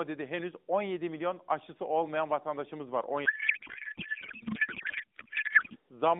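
A codec payload misread runs from 3.26 s to 5.76 s, right after "aşısı olmayan vatandaşımız var". The sound suggests AMR frames packed octet-aligned but unpacked as bandwidth-efficient, so the decoder accepts each frame yet finds every field shifted out of place. The speech gives way to garbled noise and warble that barely tracks it. Before the fault the narrowband AMR sound is only lightly damaged, fitting a 12.2 kbps mode confined to roughly 200 Hz to 3.7 kHz.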